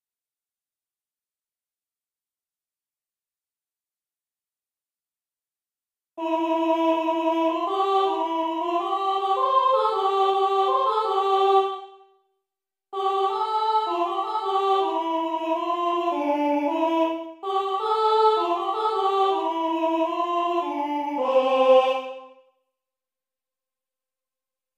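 No technical faults are audible anywhere in the audio.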